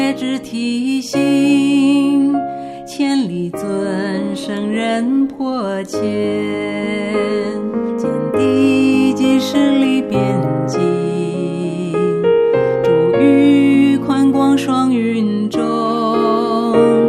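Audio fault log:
Nothing to log here, as no faults turned up anywhere in this one.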